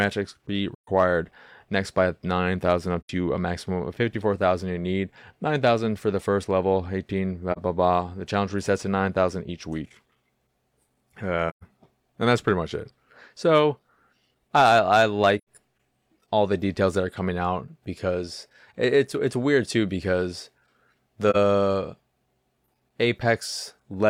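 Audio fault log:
0.74–0.88 s, 3.00–3.10 s, 7.52–7.59 s, 11.48–11.63 s, 15.38–15.44 s, 21.30–21.36 s: AAC frame loss with muting. The speech dips or drops out for about 43 to 128 ms, which fits one to three lost frames decoded as zeroed spectrum. The overlapping transform windows taper each gap, so the holes fade out and back in.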